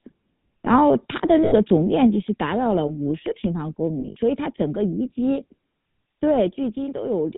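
Throughout, the speech carries the coarse, buzzy texture of the GSM full-rate codec, consistent with its 13 kbps rate. The codec fits a vocal-tract filter to each stretch and rebuilds the excitation from a sparse pulse train, discarding fine detail, with nothing above 4 kHz. The damage is plainly audible as a gravelly roughness and a dull, band-limited top end.

From 1.44 to 1.54 s, lost GSM frames cut out about 80 ms, consistent with four dropped frames. The decoder fills the gap by repeating the last good frame's settings, so the sound freezes into a short metallic ring. A second burst runs from 4.00 to 4.17 s: about 100 ms of loss scattered over 160 ms, in runs of a few tens of milliseconds, heard as brief stuttering ringing.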